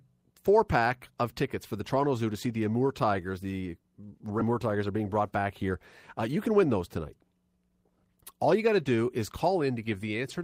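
At 4.39 s the speech skips ahead. Roughly 0.4 s of audio is gone, and the two sides are butted together with no fill. A stretch arriving late or overflowing the jitter buffer was discarded so that playback could catch up with audio already queued. The result is an abrupt jump in the speech, with part of a syllable or more simply missing and the join landing almost directly on what follows.

Immediately after, from 4.49 to 5.72 s, a jitter buffer speed-up is audible, and it repeats from 6.28 to 6.98 s. The buffer was holding more audio than its target, so the receiver trimmed short pitch-period-sized pieces repeatedly to shed the excess. Roughly 100 ms is removed in the first stretch and around 70 ms in the second. Both run at 108% speed with pitch unchanged, so the speech sounds slightly rushed through those sections.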